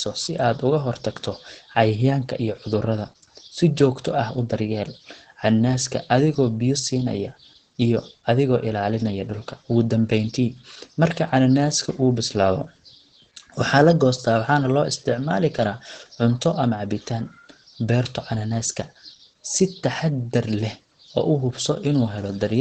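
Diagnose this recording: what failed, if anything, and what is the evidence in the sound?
Muffled, hoarse speech throughout with nothing above 8.8 kHz: likely heavy Opus compression in the codec stage, which fits its speech mode near 12 kbps.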